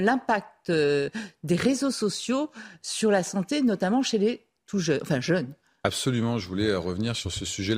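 No technical faults are audible anywhere in the speech recording.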